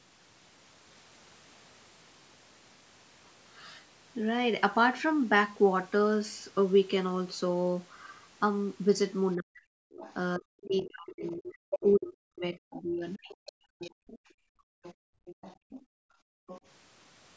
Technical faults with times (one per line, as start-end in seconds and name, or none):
9.36-9.67 speech suppressed in double talk
9.91-10.65 other side's voice leaking through
10.38-13.93 speech suppressed in double talk
11.23-12.13 other side's voice leaking through
12.77-14.19 other side's voice leaking through
14.21-16.47 background gated by the echo canceller
14.83-15.85 other side's voice leaking through
16.47-16.61 other side's voice leaking through